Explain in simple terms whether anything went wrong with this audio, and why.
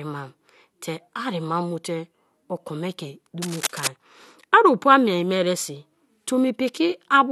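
Between 3.42 and 3.88 seconds, a burst of scratchy, crackling noise sits over the speech. It is fairly loud and lasts about half a second. This is cable scratch noise. A worn cable or connector was likely moved, briefly making the electrical contact unsteady.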